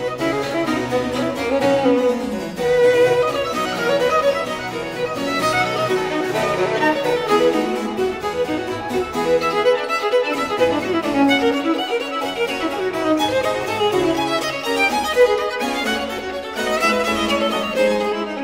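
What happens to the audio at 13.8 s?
Nothing goes wrong at 13.8 s; the audio plays through that moment intact, with no dropout, click or distortion.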